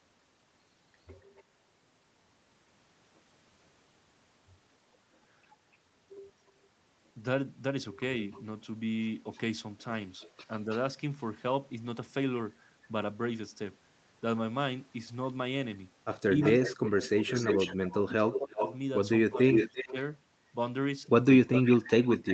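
Echo leak appears in this speech recording at 1.37 s as a barely audible scrap, from 8.19 to 10.79 s as a faint delayed copy, from 16.42 to 19.93 s at nearly the level of the talker, and from 21.48 s to the end, somewhat quieter. Its delay grows from 280 to 306, 333 and 346 ms, likely because the far end's loudspeaker is feeding its microphone past an echo canceller that is not fully removing it. Speech suppressed in double talk occurs from 16.37 to 19.96 s, where the voice dips by up to about 20 dB over roughly a second and a half in total, and briefly at 21.41 s. Both coincide with echo, likely as the canceller ducks the talker along with the echo it cannot separate.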